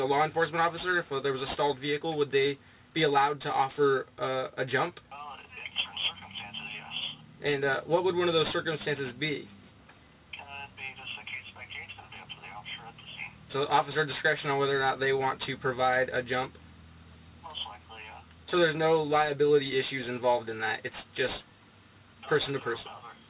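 Aliasing runs through the whole clip. The sound was downsampled without an anti-alias filter, which fits a drop from 44.1 kHz to 8 kHz. Content above 4 kHz folds back below it as unrelated tones, fairly strong against the signal. High detail sounds gritty and metallic.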